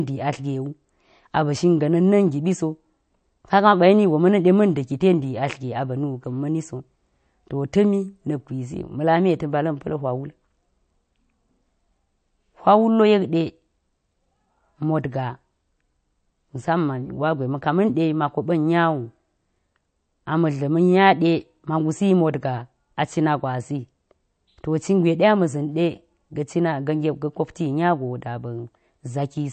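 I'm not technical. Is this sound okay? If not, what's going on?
No, not quite. All the way through, the speech has a dull, watery quality, and the cause is likely heavy MP3 compression. To save space, the file was squeezed hard: everything above about 8.6 kHz is simply gone, which takes the crispness off s and t sounds, and the quieter details flicker in and out, giving a swirly, underwater edge. It's clearly noticeable, not subtle.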